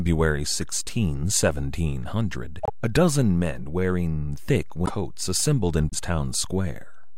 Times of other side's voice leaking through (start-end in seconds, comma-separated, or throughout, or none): none